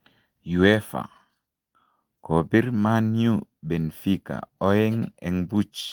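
Nothing technically wrong can be heard in this short speech recording; the signal is intact and continuous throughout.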